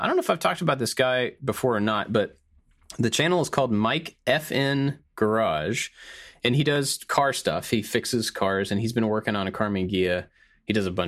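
No technical faults can be heard anywhere in the recording; the signal stays continuous and steady throughout.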